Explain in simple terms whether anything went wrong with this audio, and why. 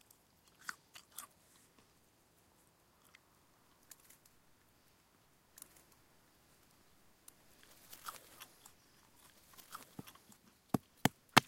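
Something did go wrong: from about 5.57 s to 10.37 s there's a doubled audio track. A second copy of the same sound runs about a second and a half behind the original, a bit quieter, so everything seems to happen twice. It has no natural fade or room sound like a real echo, and it switches on and off abruptly. The likely cause is the audio being picked up a second time through a slower route and mixed back in.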